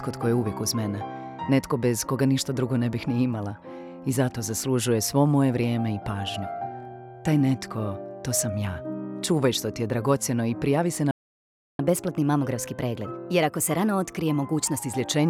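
The audio cuts out at 11.11 s and stays silent until 11.79 s, a playback stall of about 0.68 s, most likely the player running dry on data or its thread getting blocked. From 11.79 s to 14.79 s you get catch-up at higher speed: the player resamples its backlog at 1.1x, so everything runs a touch fast and sits roughly a semitone and a half sharp.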